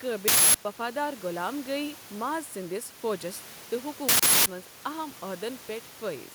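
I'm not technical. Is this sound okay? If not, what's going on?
No. Throughout the clip there is gain pumping: the level is pulled down on every loud sound and comes back up in between, a modest swing. The likely cause is microphone gain set too high, with a fast limiter repeatedly pulling the level down.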